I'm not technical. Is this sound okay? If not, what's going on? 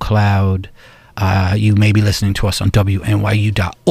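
Yes, nothing in this recording stood out as a problem when I listened to it.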